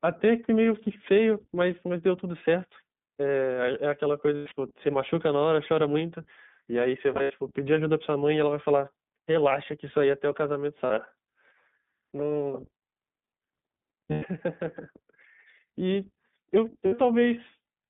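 All the way through, the speech goes through the iLBC codec, boxed into a phone band of about 150 Hz to 3.6 kHz, and it sounds plainly rough and a bit synthetic.

Then there are lost iLBC frames at 4.36, 7.14, 10.86, 14.12 and 16.86 s. Each gap, 40 to 140 ms long, gets patched by replaying the last pitch cycle mixed with noise, so you hear a short buzzy held vowel before the speech snaps straight back.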